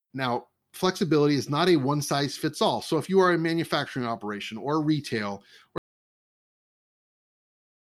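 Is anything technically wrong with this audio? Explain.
Yes. At 5.78 s, right after "manufacturing operation or retail", there's an audio dropout to silence that runs to the end, about 2.1 s. The speech cuts off mid-flow into silence, no room tone. Likely the input was lost while the recorder kept writing.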